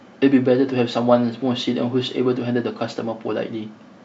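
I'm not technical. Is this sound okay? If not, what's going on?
Yes, nothing stood out as a problem when listening to this recording.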